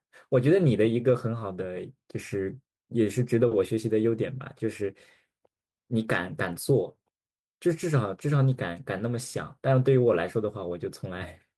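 No technical faults can be heard anywhere in the recording; the speech signal stays steady and intact throughout.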